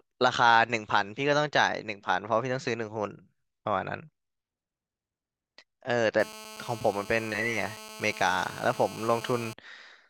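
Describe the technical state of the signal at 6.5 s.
At 6.5 s you're right inside a stretch of GSM phone buzz running from 6.20 to 9.53 s: a nearby 2G handset on a call, its bursts rectified by the audio circuitry. It's a steady, raspy 217 Hz drone full of harmonics, sitting about 17 dB under the speech.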